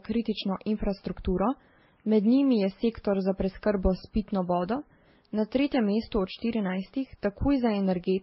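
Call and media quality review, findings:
Transcoding between lossy codecs, whole clip: layered artefacts from several codecs heard together, nothing above 5.6 kHz. Likely a low-rate MP3 re-encoded through Vorbis, then WMA; each pass adds its own grit, and the lowest cut-off stays.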